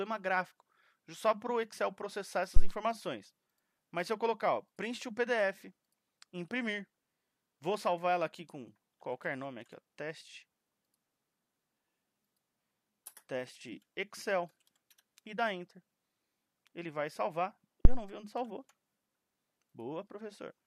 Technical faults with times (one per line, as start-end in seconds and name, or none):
2.56-2.70 phantom power thump
17.85-18.03 phantom power thump